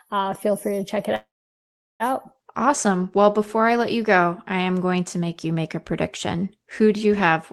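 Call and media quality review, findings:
Call audio freeze 1.15–2.03 s after "free to check it": short fade into silence, likely late packets draining the jitter buffer. Nothing lost, just everything after runs 0.85 s late.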